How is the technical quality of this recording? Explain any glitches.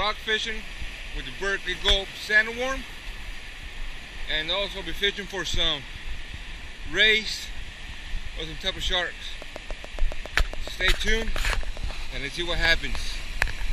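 The recording has one clear fault, a train of clicks. From 9.42 to 11.92 s, around twenty sharp, near-identical ticks arrive at a steady 7.2 per second, peaking roughly 10 dB above the surrounding sound. The regular spacing and consistent shape point to a repeating pulse, likely interference from nearby equipment or a faulty connection or power supply, heard as ticking over the audio.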